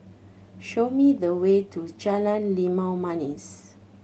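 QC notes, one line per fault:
Nothing stood out on listening to this speech clip.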